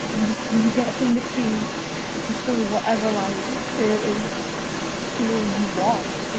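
From 0 s to the end, a second voice runs under the main speech, only a little quieter than it, heard through a top end that stops around 8 kHz. That other side's voice leaking through likely comes from a loudspeaker the echo canceller failed to fully remove.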